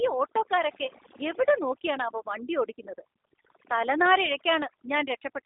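A short speech recording carries two faults for its whole length. The first is overdone noise removal. The background drops and breaks up into twinkling specks. A noise reduction stage set too strong cuts individual frequency bands whenever they sit close to its noise estimate. The quiet parts of the voice fall below that line and are removed along with the noise. What is left keeps flickering in and out band by band. The second fault is G.729 codec damage, and it is plainly audible. The speech stays intelligible but sounds rough and synthetic. Nothing is heard above 3.8 kHz, and the band runs from about 300 Hz to 3.7 kHz, as on a phone line. The codec rebuilds each short frame from a vocal tract filter, a pitch predictor and a few pulses. The grainy texture fits an 8 kbit/s G.729A stream.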